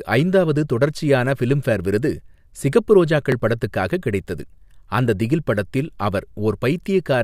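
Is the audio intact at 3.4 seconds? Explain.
No. From 3.27 to 3.43 s the speech is broken up by processor overload crackle, just after "தொடர்ச்சியான ஃபிலிம்பேர் விருது சிகப்பு" and before "படத்துக்காக கிடைத்தது அந்த திகில்". The processor fell behind and missed several very short buffer deadlines in a row, on the order of a millisecond and a half each. Each missed buffer was skipped outright, leaving tiny hard-edged gaps that pile up into a gritty tearing. A single dropout would be one clean gap. This is a clustered crackle that stops once the load passes.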